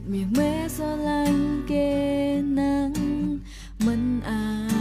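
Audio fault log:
Nothing to log here; the whole clip comes across without a single technical problem worth noting.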